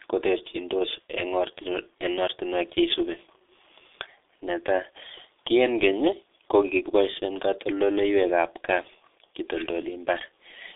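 From start to finish the speech carries heavy G.723.1 codec damage. The sound sits in a narrow telephone band of roughly 300 Hz to 3.6 kHz, with nothing above 3.7 kHz, so it is thin and muffled. The coarse, slowly updated voice model and long frames leave the speech hoarse, with smeared consonants. This fits the codec's higher-rate mode of about 6.3 kbit/s.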